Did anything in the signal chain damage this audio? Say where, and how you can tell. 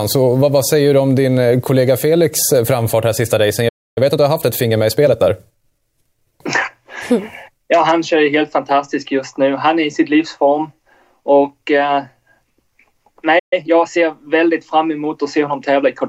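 Yes. Playback stalls at 3.68 to 3.98 s and 13.39 to 13.53 s: the sound cuts out mid-flow for about 280 ms and 130 ms, then resumes. The likely cause is the player's buffer running dry or its output thread being blocked.

After each gap comes time-compressed catch-up: from 3.98 to 5.82 s the audio runs about 1.15 times fast, and from 13.53 to 14.03 s about 1.25 times, with unchanged pitch. The player is cutting and cross-fading small segments to drain its backlog.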